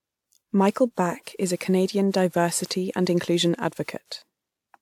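Speech throughout shows generation loss: the sound is swirly, smeared and hollow beyond what one 128 kbit/s pass would give, attacks blur, and nothing sits above 19.9 kHz. This points to a WMA 1-type codec, likely re-encoded around five times.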